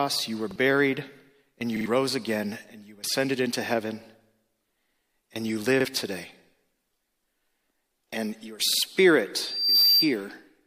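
Repeated buffer stutters occur at 0.51, 1.77, 5.81 and 8.73 s. Each replays a piece of about 46 ms, which fits a 2048-sample buffer. Those at 1.77 and 8.73 s repeat twice. From 9.36 to 10.15 s, a loudspeaker feedback squeal swells at 4.7 kHz. It builds in under half a second to about 10 dB above the sound.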